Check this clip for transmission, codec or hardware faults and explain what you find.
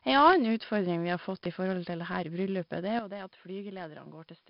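Three kinds of fault are present: heavy codec damage throughout, two pops, and a late drop in input quality.

Throughout, 4-bit ADPCM compression quantises each sample coarsely, consistent with about 44 kbps, leaving gritty hiss on loud passages, blurred attacks, and nothing above 5.3 kHz.

At 0.33 to 0.35 s and again at 1.45 to 1.47 s, a loud pop, likely a voltage spike, cracks sharply over the speech, around 15 dB above it.

From 2.99 s to the end, the input switched to a poorer device, likely a different microphone. The sound turns duller, losing everything above 4.2 kHz, drops around 10 dB in level, and gains a faint new noise floor.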